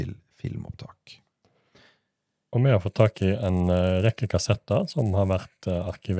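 From 2.87 s to the end, the resampler restarts on every block: each 10 ms block's edges carry a small error, giving a 100 Hz buzz under the speech.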